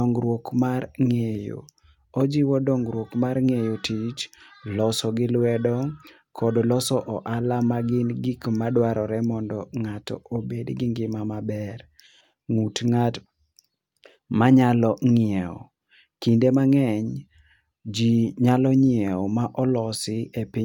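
No technical faults are audible.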